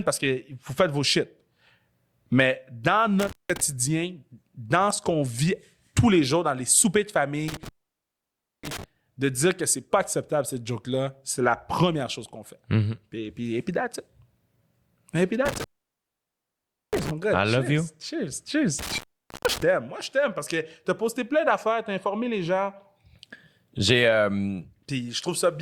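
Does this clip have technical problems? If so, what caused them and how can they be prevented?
Yes. Intermittent contact cuts the speech at 3.20–3.61 s, at 7.48–8.84 s after "dans les soupers de", at 15.46–17.11 s before "gars I love you", and at 18.79–19.63 s. A loose cable or plug opens briefly, leaving flat near-silent gaps edged by vertical crackle spikes on a spectrogram. Securing or replacing worn connectors prevents it.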